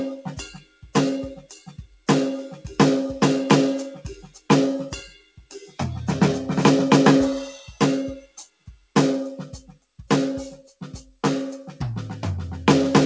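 The music has a speech noise suppressor left on across the clip. It mistakes held tones and tails for noise, so the level swings by around 5 dB and pumps. The sound cut by the noise suppressor drops sharply at 0.51–0.89 s (about 17 dB), 1.42–1.72 s (about 12 dB), 1.90–2.08 s (about 14 dB), 4.26–4.49 s (about 16 dB), 5.09–5.79 s (about 18 dB) and 8.21–8.90 s (about 18 dB). Sustained parts sink or decay early there, while attacks survive. Nothing is heard above 8 kHz, which fits a G.722 call codec.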